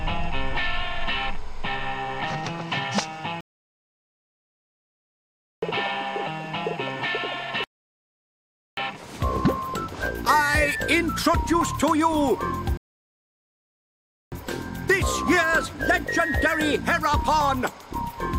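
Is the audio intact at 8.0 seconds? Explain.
No. At 8.0 seconds the clip is inside a rebuffering stall that runs from 7.64 s to 8.77 s. The player exhausted its downloaded audio and halted playback until more data arrived, so the sound drops to silence for roughly 1.13 s and then picks up at exactly the point where it stopped. No audio content is missing; the stall simply inserts dead time, pushing everything after 7.64 s later by that amount.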